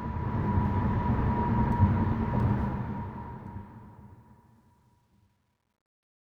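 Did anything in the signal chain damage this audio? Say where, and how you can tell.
Yes. Truncation distortion on a fade runs from 2.54 s to 6.33 s and is worst from 3.91 s to 6.34 s. It comes from the gain or sample-format stage. As the fade-out drops, the tail turns gritty. That fits undithered truncation to about 11 bits, leaving coarse square steps.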